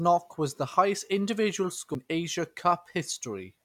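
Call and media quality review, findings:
CD skip at 1.94 s, after "highest individual": tick and very brief mute, then playback resumes elsewhere. Disc player laser jumped to another spiral turn after a knock or surface flaw.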